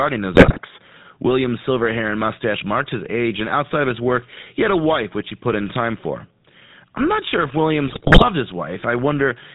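GSM full-rate codec damage runs through the whole speech clip, and its buzzy, gravelly roughness fits a 13 kbps GSM full-rate stream. The codec rebuilds the voice from a vocal-tract filter driven by sparse, regularly spaced pulses, which leaves a grainy buzz, and nothing above 4 kHz survives.

GSM bit errors strike from 0.34 to 0.60 s, and again from 7.88 to 8.27 s, right after "I'm not sure if". Corrupted bits in the filter, pitch and gain values distort the spectrum and swing the level frame by frame, so the voice breaks into squawks, pops and gargling. The damage suggests roughly 7% of bits flipped.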